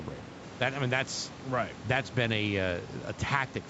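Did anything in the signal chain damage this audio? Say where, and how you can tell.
No, nothing damaged it.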